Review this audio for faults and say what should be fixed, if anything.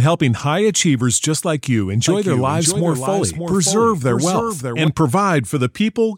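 From 2.08 to 4.88 s there is a doubled audio track: a second, full-band copy of the speech trails about half a second behind, roughly 5 dB quieter, with no reverb tail. It starts and stops abruptly. The likely cause is a second capture path or a misaligned edit. On a spectrogram the same formant patterns appear twice, offset horizontally. The waveform shows a hard-edged block of overlapping energy. To prevent it, monitor from a single capture path and check edits for stray duplicate regions.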